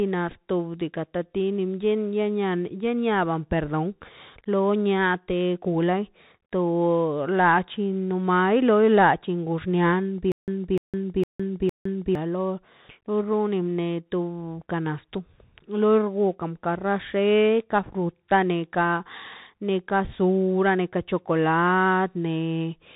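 Throughout, the speech passes through a Bluetooth CVSD headset codec, which encodes one bit per sample, stepping up or down with an adaptive step size, and the sound fits 64 kbps CVSD. Nothing above 4 kHz survives, sibilants turn scratchy, and granular hiss sits beneath the speech, the codec damage plainly audible.

From 10.32 to 12.15 s, a stutter with silent gaps, likely from a stalled player or stream retrying, replays one 0.30 s fragment four times, each followed by 0.16 s of digital silence, a steady 0.46 s cycle, while the intended audio is lost.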